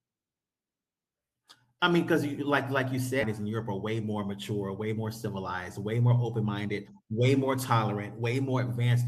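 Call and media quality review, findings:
Skip ahead at 3.21 s. Speech jumps forward with no gap and no fill. Roughly a second of audio is gone, and the two sides are butted together. Probable component: jitter buffer, or loss in transit. Queued later audio was played straight on. Sudden cut in the speech flow.

Jitter buffer speed-up from 5.96 to 7.29 s. Speech runs at 109 percent, pitch unchanged. Sounds rushed. Probable component: receiver jitter buffer draining excess delay. Many short pitch-period pieces were cut in a row, about 150 ms in total. Playout latency was reduced.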